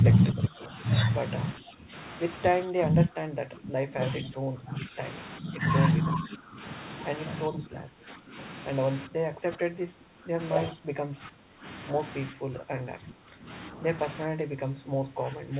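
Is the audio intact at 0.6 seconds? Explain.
No. At 0.6 s the speech is being turned down by speech suppressed in double talk, which runs from 0.01 to 0.73 s. The level dips by around 5 dB at its deepest, over roughly half a second in total, so the talker's voice sounds pulled back and uneven. This is likely the echo canceller treating simultaneous talk from both ends as echo and attenuating everything rather than risk passing echo through.

Overlapping this, an echo leak is audible from 0.13 to 0.67 s, so it is still present at 0.6 s. A faint delayed copy of the speech, roughly 20 dB below the direct voice, trails it by 405 ms. This points to the far end's loudspeaker output reaching its microphone, with echo cancellation not fully removing it before sending it back. The result is a repeat under the main speech, band-limited like the rest of the call audio, which carries nothing above 4 kHz through its G.711 mu-law path.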